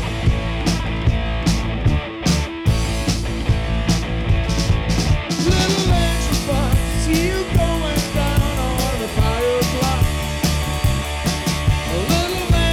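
Hard clipping runs throughout: the signal arrives about 6 dB hotter than some stage can pass, so its peaks are sliced flat. Only a small fraction of samples, around two percent, exceed the limit, so the flattened tops add high harmonics that crackle on the loudest moments.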